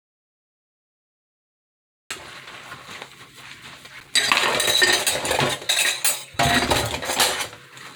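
The clip opens in an audio dropout to silence that is already under way and lasts until 2.1 s. The gap is silent, with no room tone at all, which points to the input likely having been lost while recording continued. Whatever sounded there is gone.

Loose connector crackle follows from 3.99 to 4.08 s and again from 6.55 to 6.80 s. These are irregular bursts of crackle and scratching, as a worn or dirty contact repeatedly makes and breaks and chops the signal.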